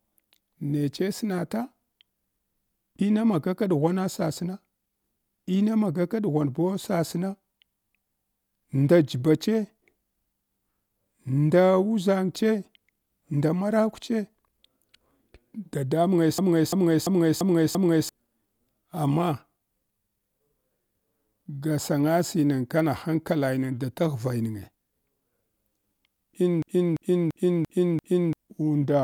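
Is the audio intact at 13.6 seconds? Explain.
Yes, at 13.6 seconds the speech plays through intact, with no audible fault at that moment.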